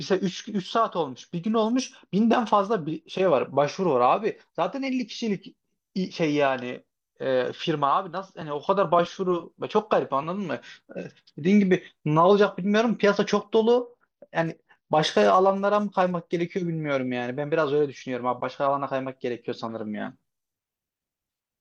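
From 1.33 to 3.39 s and again from 13.77 to 16.45 s, the speech turns dull and gritty: a Bluetooth SBC bit pool drop. The coarser coding starves the upper sub-bands, consistent with the bit pool falling from 28 to 12, near 96 kbps, before recovering.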